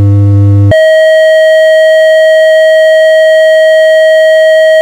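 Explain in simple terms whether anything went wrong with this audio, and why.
Nothing went wrong that I could hear; on listening, nothing in this audio stood out as a problem.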